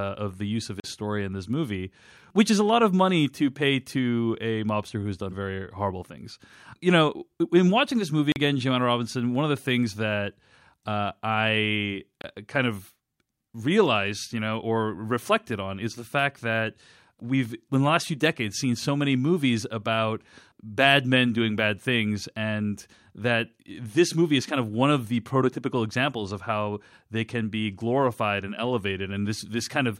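At 0.80 s, between "of the use of" and "story in this movie", a 40 ms block of digital silence cuts in; it recurs at 8.32 s after "in watching this movie" for 40 ms, and at 12.22 s, between "things that uh I" and "kind of", for about 25 ms. Each time the output buffer likely went unfilled and was zeroed, so the signal drops abruptly, heard as a brief hole in the speech.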